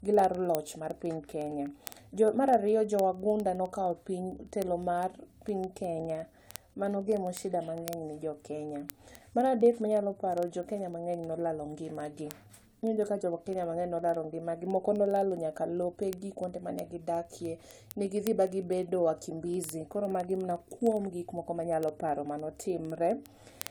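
Repeated lossy coding likely affects the whole speech clip. The audio seems to have been decoded and re-encoded a few times, which fits AAC-LC at around 96 kbit/s, each pass adding fresh quantisation. This generation loss sounds swirly and hollow, consonant attacks blur, and nothing remains above 20 kHz.

From 0.14 s to 23.67 s, a digital receiver runs on its own clock, off by roughly 400 ppm from the sender's, so one sample slips about every 50 ms. These word clock ticks come as hundreds of sharp clicks of uneven strength at a steady rate.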